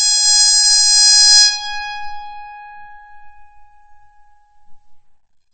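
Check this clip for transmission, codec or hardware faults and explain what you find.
One codec fault runs through the whole music clip: MP3 compression, likely at a low bitrate such as 32 kbps. Nothing survives above 8.5 kHz, and weak frequency components flicker on and off between frames, giving a watery, swirly smear. That flicker, not the treble cut alone, separates it from a plain low-pass filter.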